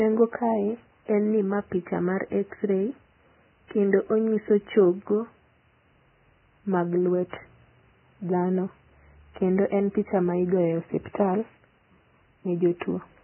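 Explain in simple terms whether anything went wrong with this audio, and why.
Yes, something's off from start to finish. The speech sounds muffled and grainy, with nothing above about 3 kHz and a hissy roughness on the remaining detail. That's likely heavy Vorbis compression, which cut the treble and coarsely replaced fine detail with noise.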